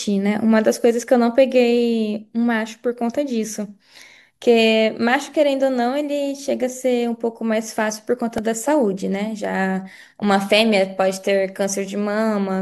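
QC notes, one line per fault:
8.38 s, repeated buffer: fresh audio failed to reach the output in time, so the device replayed the last block it held twice more instead of going silent. Each block lasts about 1.33 ms, which fits a 64-sample buffer. Three identical copies play back to back with a hard join at every seam, and a few milliseconds of the real signal are skipped. At this tiny size the repeats are too short to register as a stutter, so the speech carries a sharp click or brief buzz.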